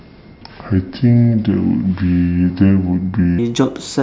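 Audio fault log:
0.00–3.39 s, wrong sample rate: the speech runs slow and low, at about 0.73 times its proper speed and roughly 5.5 semitones down, with tempo and pitch dropping together by the same ratio. The samples are being clocked out more slowly than they were captured, with no rate conversion in between, which fits material recorded at 22 kHz and played back at 16 kHz. Voices come across deepened and dragged, with formants shifted downward along with the pitch.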